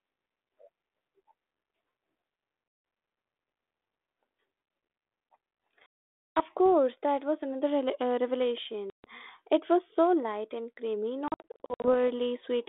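Packet loss on an ADPCM call occurs at 2.68 s (160 ms), 5.86 s (500 ms, ending before "course that was another"), 8.9 s (140 ms) and 11.28 to 12.09 s after "so light and creamy", where short gaps of up to 60 ms are scattered. Each hard-edged silence leaves the decoder's predictor and step size out of step with the sender's, so the speech returns slightly distorted before settling.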